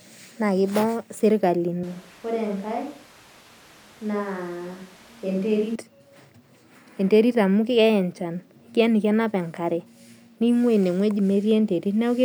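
From 1.84 to 5.75 s, speech suddenly turns roomy, thin, quieter and noisier, likely a switch to a distant microphone, unlike added reverb alone.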